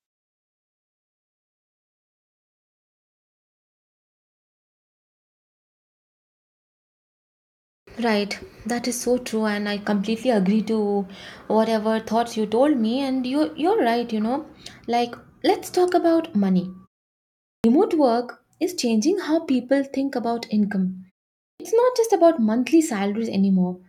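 At 7.83 s, at 17.6 s before "work is changing how", and at 21.56 s after "people think about income", a clipped start after a pause swallows about 38 to 43 ms of onset as the output wakes from silence. Speech itself is lost here.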